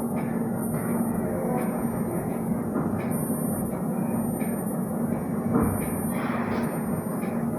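Throughout, stereo read as mono: interleaved left-right samples play as one channel, so everything runs at half speed, an octave low, with a faint mirrored spectrogram image above.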